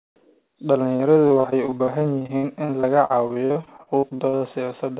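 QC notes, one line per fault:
0.92–4.43 s, repeated packet loss (robotic sound): over thirty dropouts in quick succession, the longest about 61 ms, each papered over by stretching the preceding sound before the next gap hits. Roughly a quarter of this span is synthetic fill, about 0.93 s in total, while a similar amount of real signal is simply gone. That gives the choppy, robotic texture. The band stops at 4 kHz, consistent with a G.711 narrowband call path.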